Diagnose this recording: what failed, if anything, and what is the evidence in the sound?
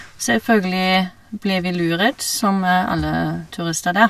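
Nothing in this speech recording points to a failure at any stage of the chain. There is no event in the sound that calls for a time stamp or a mechanism to explain it.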